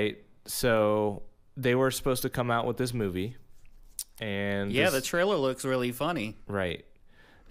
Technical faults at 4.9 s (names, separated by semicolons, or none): none